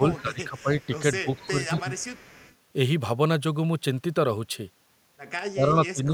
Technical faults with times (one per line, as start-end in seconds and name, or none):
0.00-0.76 speech suppressed in double talk
0.15-0.21 echo leak
0.57-0.99 echo leak
1.22-1.90 speech suppressed in double talk
1.34-1.48 echo leak
1.79-2.54 echo leak
5.52-6.14 speech suppressed in double talk